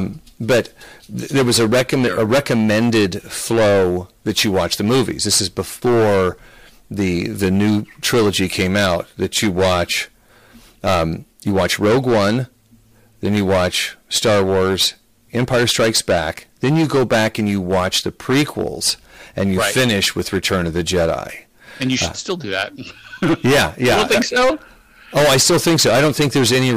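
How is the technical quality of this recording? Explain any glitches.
The quality is poor: the speech is hard clipped from start to finish. The level is pushed about 20 dB past what the chain can pass, so roughly a tenth of the waveform gets sliced flat. Those squared-off peaks throw harmonics way up the spectrum, and every loud syllable turns into harsh fuzz.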